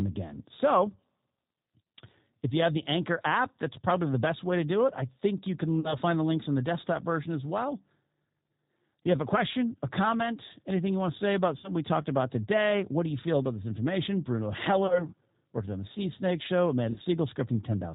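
G.729 codec, throughout: speech rebuilt from a vocal tract filter, pitch predictor and sparse pulses sounds rough and synthetic, with nothing above 4 kHz, which fits an 8 kbit/s coder.

VoIP packet loss concealed by the speech codec at 5.80–5.95 s, 11.58–11.70 s, 14.87–15.07 s and 16.92–16.99 s: the decoder extrapolates its last pitch and filter over gaps of 40, 60, 20 and 40 ms, giving a fading buzzy tone or coloured noise that stays weak afterward.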